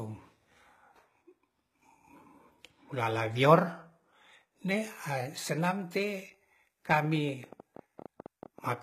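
Throughout the speech, the treble is likely being rebuilt by HE-AAC compression. The codec carries only the lower spectrum and synthesises the top by copying bands upward. The damage is plainly audible and points to a bitrate near 20 kbps, with s sounds turning gritty and metallic.

From 7.05 to 8.75 s, a pulse source, likely interference or a faulty connection, injects a train of clicks at 10.7 per second with uneven spacing. Roughly twenty similar clicks are heard as irregular ticking, about as loud as the speech itself.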